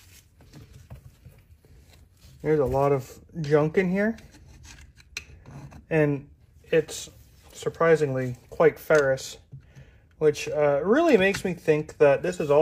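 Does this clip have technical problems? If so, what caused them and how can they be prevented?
No, nothing in the signal path shows up as a technical fault here, so there is no cause to trace and nothing to prevent.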